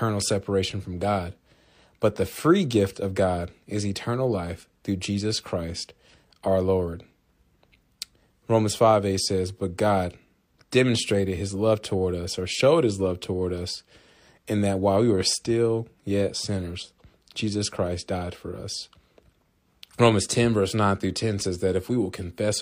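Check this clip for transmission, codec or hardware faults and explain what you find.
No transmission, codec or hardware fault is audible anywhere in this speech recording.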